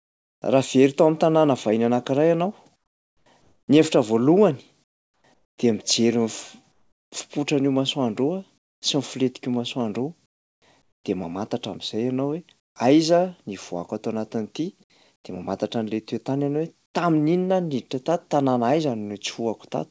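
In the pauses at 0.0–0.42, 2.76–7.12, 8.58–8.82, 10.26–11.04, 12.60–12.76, 15.16–15.24 and 16.86–16.94 s, the background turns into a flat, featureless hiss, about 18 to 23 dB quieter. This is comfort noise in place of the background, likely from discontinuous transmission.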